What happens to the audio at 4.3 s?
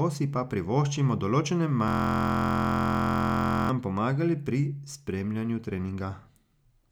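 Nothing goes wrong at 4.3 s; the audio runs through that moment intact, with no dropout, click or distortion.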